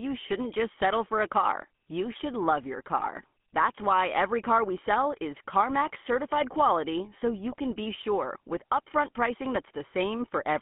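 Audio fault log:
throughout, GSM full-rate codec: The speech has a buzzy, gravelly roughness and a boxed-in, telephone tone, with nothing left below about 150 Hz or above about 3.4 kHz. The roughness comes from a codec that models the vocal tract and drives it with a coarse, regularly spaced pulse excitation, discarding much of the fine detail between pulses. The plainly audible damage and narrow band are consistent with the 13 kbps full-rate GSM codec.
3.00 to 3.07 s and 7.52 to 7.56 s, GSM bit errors: Two brief squawks break through the speech, the first about 74 ms long and the second about 38 ms, each a gargled pop. Corrupted bits reached the decoder, so the filter, pitch or gain values it received were wrong for those moments, bending the spectrum and jolting the level. Each burst spans a few frames, and the harshness suggests an error rate of roughly 1 to 2 percent of bits.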